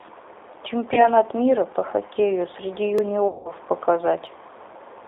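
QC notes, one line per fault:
Throughout: G.729 codec. The whole clip runs through the 8 kbit/s G.729A speech codec, which rebuilds each 10 ms frame from a vocal tract filter, a pitch predictor and a few pulses. The line band is 300 Hz to 3.7 kHz, so the top and the deep bottom are gone. Codec damage is plainly audible as a rough, slightly synthetic grain. A plain band-limit would only sound muffled and would not add this texture.
0.94 to 1.10 s and 3.28 to 3.52 s: VoIP packet loss concealed by the speech codec. About 30 ms of audio is lost in the first event and about 170 ms in the second, which fits 10 ms frames. The decoder keeps extrapolating its last pitch and filter with falling gain, so the sound stretches into a buzzy tone or coloured noise that fades instead of dropping out. Because each frame builds on the last, the speech stays weak after the packets return.
2.98 s and 4.27 s: block of digital silence. 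Each is a hole of about 1.3 ms, which fits a 64-sample buffer that was not filled in time. The output cuts out and back with no fade, so each one is heard as a tick or dip rather than a gap. Packet-loss concealment fills its gaps with decaying codec sound, but these are true blanks with hard edges.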